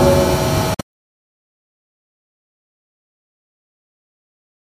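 A Bluetooth dropout breaks up this recording of everyday sound between 0.74 and 1.12 s. Across that 0.38 s stretch the output cuts to silence in separate holes, adding up to about 232 ms of missing audio. The longest gap is about 116 ms. Each hole has abrupt edges or a fade of a few milliseconds, and the sound resumes further along, as if it had kept playing. This pattern points to wireless packets that likely arrived too late to play and were discarded.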